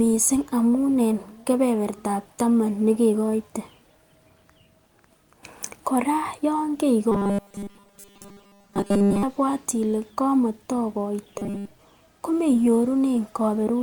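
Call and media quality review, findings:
Robotic sound from repeated short buffers, 7.12–9.23 s and again 11.38–11.68 s. Speech turns into a stiff, metallic buzz at 200 Hz. Likely a starved playout buffer looping a 5 ms chunk, so most of the real audio gets skipped.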